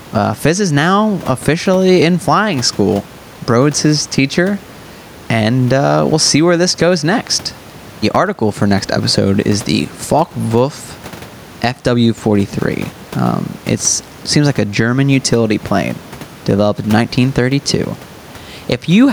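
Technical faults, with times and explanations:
Throughout, gain pumping. The gain swings by around 10 dB. The likely cause is input gain set far too high, with a fast limiter pulling each loud syllable down. Levels sound squashed together.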